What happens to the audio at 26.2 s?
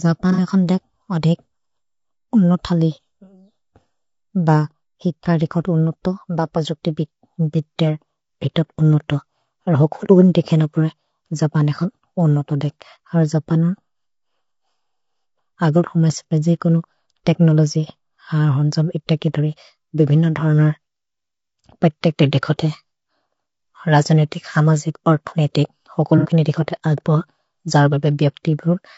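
Right after "हमजिक् अर्थोनेतिक्", from 26.18 to 26.28 s, there is AAC frame loss with concealment. About 60 ms of coded audio went missing, which fits two lost frames. The decoder patched the gap from the last good spectrum, so the sound turns briefly smeared and noisy.

That patch sits over low-delay AAC compression, likely AAC-ELD at a rate that fits about 32 kbps. Its short frames resolve harmonics poorly. The speech sounds rough and grainy, with noise between harmonics and a synthetic top band.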